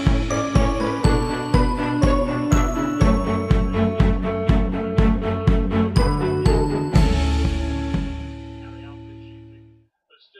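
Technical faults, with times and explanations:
No technical faults detected.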